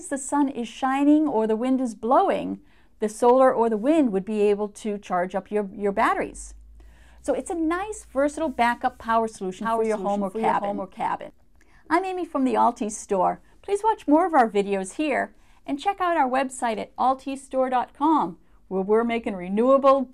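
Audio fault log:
9.62–11.30 s, doubled audio track: the same audio was likely mixed in a second time, either picked up again through a slower path or held twice out of step by an edit. A full-band copy trails the original by about half a second, a few dB quieter, with no decay or room colour, so everything sounds twice in close succession. The copy starts and stops abruptly at the edges of this span.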